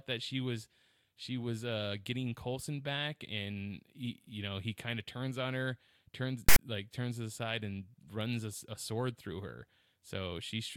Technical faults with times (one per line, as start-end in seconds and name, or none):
6.49-6.59 file tags played as audio